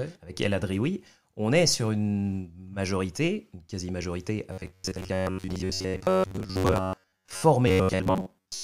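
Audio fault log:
4.52–7.42 s and 7.68–8.63 s: robotic sound from repeated short buffers. The speech turns into a stiff metallic buzz at 93.8 Hz, likely because an 11 ms slice keeps repeating while most of the real audio is skipped.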